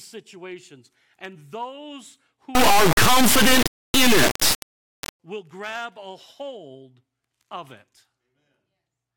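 From 2.55 to 5.20 s the speech turns into a harsh, extremely loud buzzing square wave. This is integer read as float. The 32-bit integer samples are read as 32-bit floats. The output slams between silence and the clipping limit until "will grab a hold".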